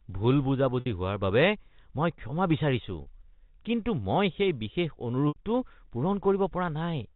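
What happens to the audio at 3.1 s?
Just before that point, from 3.02 to 3.06 s, there is packet loss with pitch repetition. About 40 ms of audio, consistent with two lost packets, is replaced by the receiver repeating the last pitch period, which comes through as a brief held, buzzy tone.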